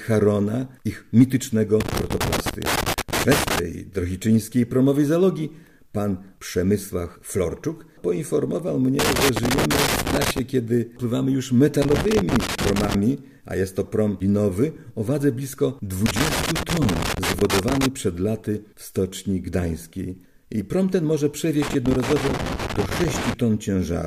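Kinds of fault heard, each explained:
Loose connector crackle: heard at 1.80–3.59 s, 8.99–10.39 s, 11.82–12.94 s, 16.06–17.86 s and 21.62–23.34 s, each burst lasting between about 1.1 and 1.8 s. A worn or dirty contact keeps touching and separating as it shifts, so the signal is repeatedly interrupted and any DC present on the line snaps in and out as pops. The result is irregular scratchy crackling laid over the sound during each of these spans.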